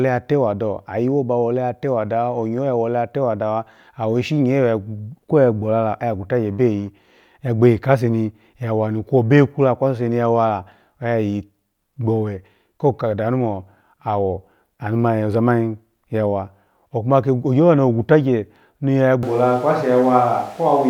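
At 19.23 s, running to the end, the voice turns abruptly roomy and hollow with thinner bass, at about the same level, with room noise around 30 dB below the speech. This is likely a switch to a distant microphone. On a spectrogram the low end thins and reverberant tails smear between syllables. The waveform's gaps no longer drop to near silence.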